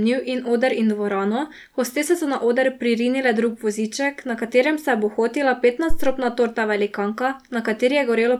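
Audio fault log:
5.90–6.23 s, phantom power thump: Right after "katerem se je bohotila", a deep thump cuts through the speech and dies away in about 74 ms, well before "torta velikanka". It peaks at about -7 dBFS. A supply was switched on or off on the live input. The sudden voltage step passed through the coupling capacitors as a low-frequency pulse, and that pulse is the thud you hear.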